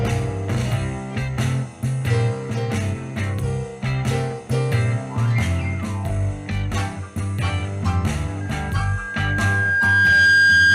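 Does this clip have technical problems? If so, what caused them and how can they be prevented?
Yes. Loudspeaker feedback squeal starts at 8.40 s: a 1.6 kHz tone builds over about two seconds to roughly 10 dB above the sound and runs to the end. Lower the gain and keep microphones away from loudspeakers.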